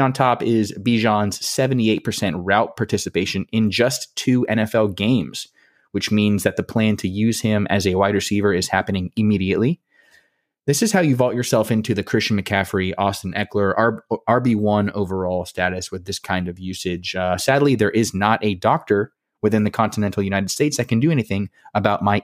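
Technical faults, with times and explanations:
No technical faults can be heard in this speech recording.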